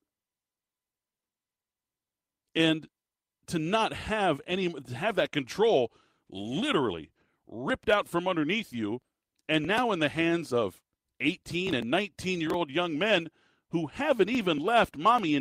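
No technical faults can be heard anywhere in the speech.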